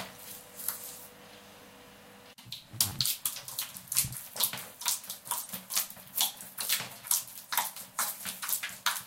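A few compressed frames were damaged and decoded anyway from 5.41 to 5.48 s. This corrupt frame decoded fault misplaces energy across frequencies, producing a brief, fairly quiet glitch.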